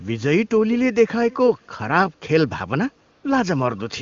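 A short speech recording, and two things stand out. From 1.31 to 1.67 s there's a faint delayed copy of the speech trailing in about 460 ms late and roughly 25 dB down, most likely an echo leak: someone on a loudspeaker whose echo canceller let part of the playback back into their mic, so it got sent back to you. Then from 3.11 to 3.23 s the real background drops out for 120 ms and gets swapped for a smooth, even hiss. That's AMR comfort noise: the phone decided nobody was talking, stopped sending speech frames, and the receiving end covered the gap with synthetic noise built from a rough sketch of the background's level and tone. Underneath it all the speech is carried on the AMR wideband (HD Voice) codec at a rate that fits 23.85 kbit/s, and any coding damage is faint at most.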